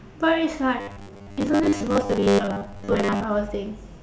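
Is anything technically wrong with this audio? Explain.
Yes. From 0.81 s to 3.24 s the speech turns into a rigid, metallic buzz at 100 Hz, a robotic sound from repeated short buffers. It is likely caused by audio arriving too seldom, so a 10 ms chunk gets replayed for most of that stretch while the real audio is skipped.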